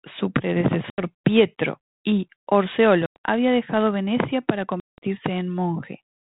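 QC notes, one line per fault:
0.90–1.07 s, 3.06–3.16 s, 4.80–4.98 s: packet loss on an ADPCM call. Hard silent gaps of 80, 100 and 180 ms. The decoder's adaptive prediction loses step, so speech returns slightly distorted.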